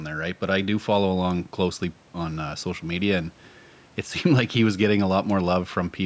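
No technical faults can be heard in this speech.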